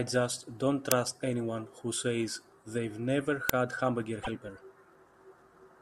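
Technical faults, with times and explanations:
0.92 s and 3.49 s, uninitialised buffer: at each moment the playback chain sent out a block before any audio had been written into it, so whatever leftover memory sat there was played as if it were sound. Each event is a sharp burst of digital noise lasting about 2.67 ms, which fits a 128-sample buffer. Because that memory holds no real signal, the burst has no relation to the speech around it.
4.21–4.28 s, broken MP3 bit reservoir: the audio skips forward and the stretch just after the skip comes out garbled rather than as clean speech. The likely cause is a run of compressed frames going missing, with a frame length that fits 24 ms. The next frame then reaches back for the data it had stored in earlier frames and reads bytes belonging to a different frame, so it decodes into a brief scrambled disturbance.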